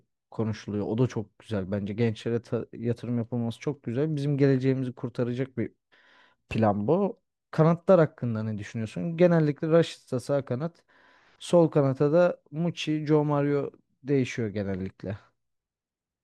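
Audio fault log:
No faults are heard in this speech clip. There is nothing to log here.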